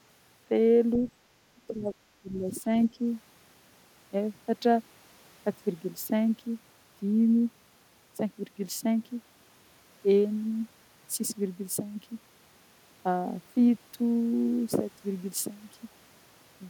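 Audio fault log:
1.67–2.65 s, speech suppressed in double talk: over this stretch the speech dips hard, sinking by as much as about 20 dB, with roughly 0.7 s of the window pulled down in total. That ducked sound likely comes from an echo canceller that heard both ends talking at once, couldn't tell the near talker apart from the loudspeaker echo, and turned the whole lot down.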